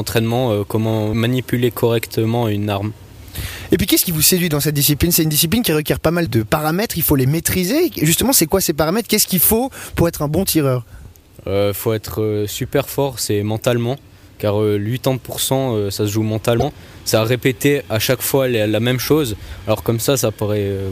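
At 16.58 s a brief glitch interrupts the sound, lasting about 50 ms before playback picks up again at 16.63 s. It is damaged data in a compressed stream: a stretch of the encoded bytes was corrupted, so the decoder misread those frames, lost its place in the bitstream and had to hunt for the next valid frame header.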